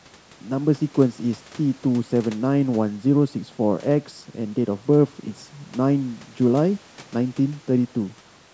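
No technical faults can be heard anywhere in the speech. It has passed through a call's microphone processing, which trims away the lowest bass and leaves nothing above 8 kHz.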